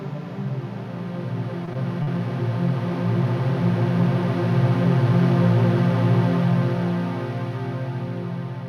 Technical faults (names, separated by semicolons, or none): short concealed packet loss